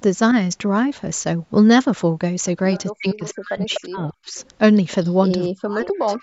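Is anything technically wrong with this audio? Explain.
Yes. Two kinds of fault are audible.

Echo leak occurs at 2.73–2.80, 3.09–3.33, 3.70–3.81, 4.35–4.47, 5.03–5.14 and 5.86–6.16 s. Scraps of voice return about 247 ms late, roughly 10 to 30 dB below the speech. The likely cause is a far-end loudspeaker whose echo canceller let some pickup through.

Speech suppressed in double talk occurs from 2.97 to 4.35 s and from 5.47 s to the end. The voice dips and breaks up, falling by as much as about 40 dB. This is likely an echo canceller turning down everything while both sides speak at once.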